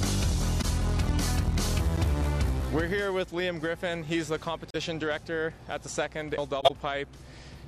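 At 0.61 to 0.65 s there is a corrupt frame concealed. The decoder detected damaged data and patched over it rather than play garbage. The result is a short, soft-edged dip of about 37 ms, consistent with a single AAC frame, with no click. On a waveform the envelope sags and recovers smoothly. On a spectrogram a thin vertical band loses energy or turns slightly smeared.

At 1.96 s comes a CD skip. A brief mute and tick mark where the laser jumped to a different turn of the disc's spiral, and playback resumes from another point, so the sound lurches discontinuously. The waveform shows a tiny flat gap then an abrupt, unmatched edge. The spectrogram shows a sharp vertical tick and a pattern that no longer lines up across the cut.

At 4.70 to 4.76 s a second concealment covers about 56 ms, which fits two consecutive frames. It is a slightly longer soft hole with the same gentle-edged dip in the envelope and a faded or blurred column on the spectrogram.

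At 6.37 s a second CD skip gives an even shorter mute and tick followed by the same abrupt jump in position.

From 6.58 to 6.71 s the longest concealment, about 122 ms and consistent with five frames, leaves a smear or dropout. It is visible as a wider blurred or hollowed band in the spectrogram and a drawn-out dip in the waveform.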